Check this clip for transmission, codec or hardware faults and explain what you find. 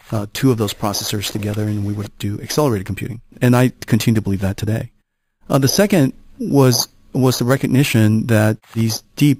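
There is one fault, present for the whole clip: imaging from sample-and-hold upsampling. A bright, metallic fizz rides on the sound, about 16 dB below it and rising and falling with its level. Each sample was simply repeated with no smoothing filter, which fits an original rate near 11 kHz. The first mirror copy of the spectrum therefore sits between about 5.5 kHz and 11 kHz, with further copies above it, and this lowest copy moves opposite to the pitch.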